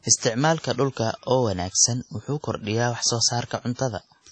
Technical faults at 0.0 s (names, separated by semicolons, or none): WMA compression